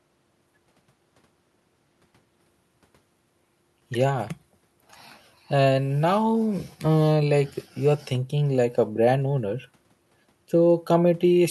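No technical faults are audible anywhere in this recording.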